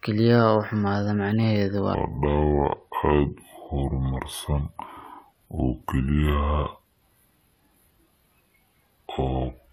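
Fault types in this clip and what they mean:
Section at the wrong speed: from 1.95 s, right after "xumaada macnaheedu", to the end, the speech turns deep, heavy and dragged out, as if slowed and lowered together. It plays at about two thirds of its proper rate (0.662 times), which drops the pitch by roughly seven semitones. The likely cause is this stretch being played back against the wrong clock, so duration and pitch shift as one.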